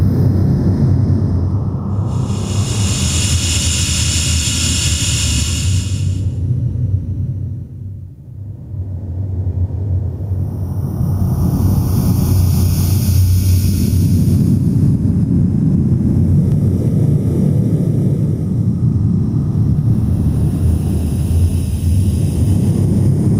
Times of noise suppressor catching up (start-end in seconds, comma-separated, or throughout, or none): none